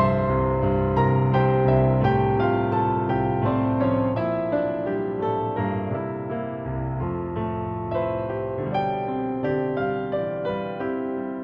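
No technical faults turn up anywhere in the audio. Nothing breaks in, drops out or shifts at any point.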